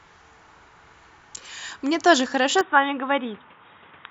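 Speech that turns dull and boxy from 2.61 s to the end, with no gap and no level jump. The likely cause is an input switched to a poorer device: a spectrogram shows everything above 3.8 kHz vanishing at that instant, with a faint new noise floor, while the waveform continues unbroken.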